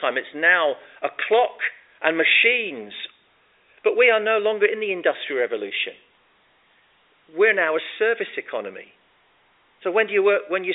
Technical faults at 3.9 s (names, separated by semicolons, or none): none